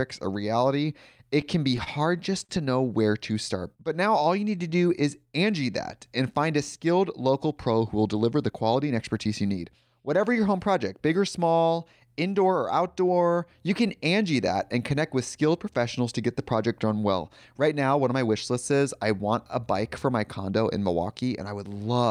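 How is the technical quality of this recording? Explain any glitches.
The recording has three network-timing glitches in the first ten seconds. Each one changes the pacing of the speech rather than its pitch or tone.

From 1.41 to 2.51 s, between "a reality" and "to know where", the speech catches and drags in six small hitches. This is repeated stalls (stutter). The jitter buffer kept running dry, and the receiver extended the last sound through each wait. That added 115 ms in total, with the longest gap 51 ms, and nothing was lost.

From 3.22 to 6.04 s, after "to know where" and up to "and find a skilled", the speech sounds drawn out and slightly sluggish, at 93% speed with unchanged pitch. This is a jitter buffer slow-down. The receiver repeated individual pitch periods to rebuild its reserve, adding 205 ms.

From 7.91 to 9.73 s, following "a skilled local pro", the delivery turns hurried, running at 110% speed without any pitch shift. 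This is a jitter buffer speed-up. With too much audio queued, the receiver trimmed out short pitch-period slices, about 0.2 s in all, to reduce the delay.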